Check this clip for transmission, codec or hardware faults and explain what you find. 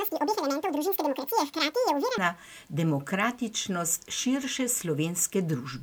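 One fault stands out: from 0.00 to 2.18 s the speech is audio read two samples at a time (double speed). The reader treats each pair of samples as a single frame, so the speech runs twice as fast and sits 12 semitones, an octave, higher. On a spectrogram, harmonics and formants stretch upward to double their spacing. The waveform looks squeezed in time.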